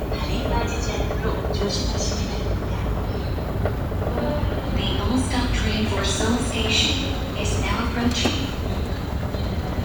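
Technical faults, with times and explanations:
No technical faults detected.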